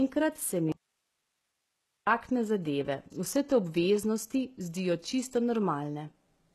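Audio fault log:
Throughout: HE-AAC compression likely, with plainly audible codec damage: nothing above 12.3 kHz, and the treble is rebuilt from copied lower bands, which fits a bitrate near 16 kbps.
0.72–2.07 s: audio dropout to a faint residue. Speech cuts abruptly after "se mi" for 1.35 s, leaving only hiss around 50 dB down, likely because the path after the break stayed live.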